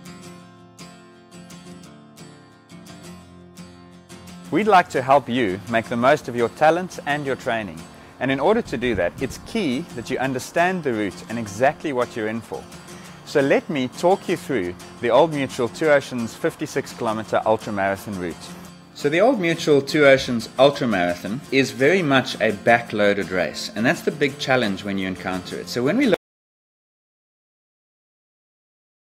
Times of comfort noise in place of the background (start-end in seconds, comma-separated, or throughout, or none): none